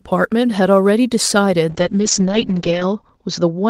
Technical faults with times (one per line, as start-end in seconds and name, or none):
0.00-3.70 sample clock jitter
1.71-3.70 call bitrate drop